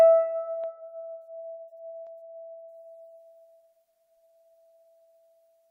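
At 0.64 s and again at 2.07 s the music carries a single sharp click, each the kind of tick that dropped samples produce. The likely cause is a tiny fraction of a millisecond of the stream going missing, so the waveform leaps straight from one value to a later one with no sound removed. On a waveform each shows as a sudden step; on a spectrogram, as a thin vertical line across all frequencies.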